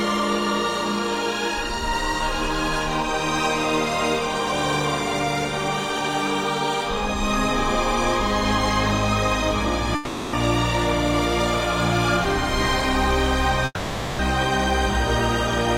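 From 9.95 to 10.35 s the last sound smears into a fading buzz for about 0.38 s, and from 13.65 to 14.21 s a longer 0.54 s fade ends in a brief silence. The audio then resumes with the gap's content skipped, likely a long network dropout the receiver concealed.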